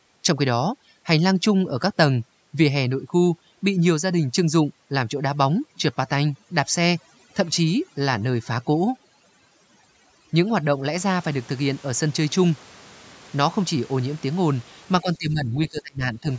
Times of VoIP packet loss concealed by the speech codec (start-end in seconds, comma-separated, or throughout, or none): none